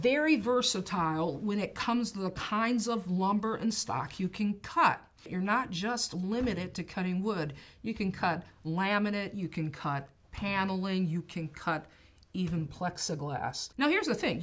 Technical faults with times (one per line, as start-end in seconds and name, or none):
none